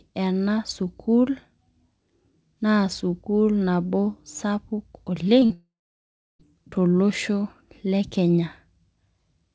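At 5.40 to 5.43 s and 5.45 to 5.52 s, short concealed packet loss occurs. Missing audio is patched by extending the last sound, heard as brief smears or wobbles. From 5.54 to 6.41 s comes a long network dropout, likely caused by packets not arriving. A fading buzz or hiss trails off into 0.69 s of silence before the speech resumes with that part gone. Throughout, the call path leaves nothing above 8 kHz.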